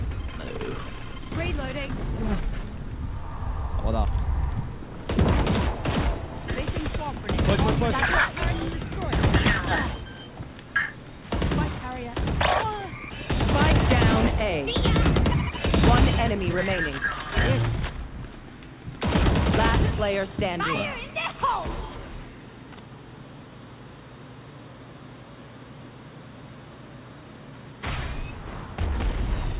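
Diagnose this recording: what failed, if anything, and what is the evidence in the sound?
Nothing failed, and there is no fault evidence in the sound.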